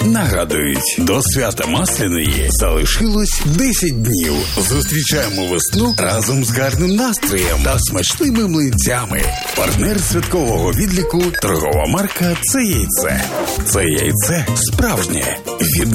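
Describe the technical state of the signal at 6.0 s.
At 6.0 s the signal is intact, with no dropout, clipping, glitch or other fault audible at that point.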